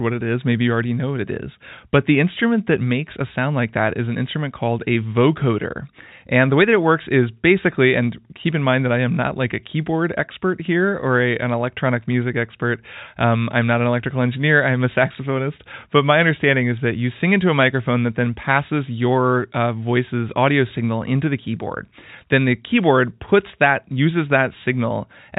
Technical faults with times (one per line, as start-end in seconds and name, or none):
none